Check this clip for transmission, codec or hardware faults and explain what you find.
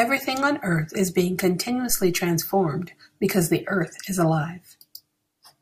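There is one hardware fault in this speech clip. From 1.90 s to 2.29 s a phantom power thump intrudes. Switching the supply on a live input puts a DC step through the coupling capacitors, and the preamp passes it on as a low-frequency pulse. It sounds as a deep thump peaking at about −22 dBFS, dying away with a decay of roughly 87 ms.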